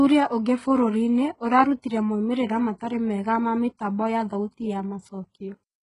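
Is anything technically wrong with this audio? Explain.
Yes. Throughout the speech the treble sounds synthetic: s sounds turn gritty and lispy, and nothing exists above about 10.9 kHz. This is likely HE-AAC compression, which codes the low band and rebuilds the top by copying it upward under a coarse envelope. The heavy damage points to a bitrate around 12 kbps. A spectrogram would show a hard ceiling at 10.9 kHz and repeated, blocky high-band patches that don't line up with the harmonics below.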